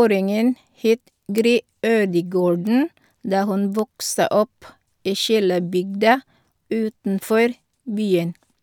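Speech, with four bit error spikes: sharp, broadband ticks at 1.38, 2.67, 3.79 and 5.74 s, where single flipped bits jumped one to three samples, loudest near about -2 dBFS.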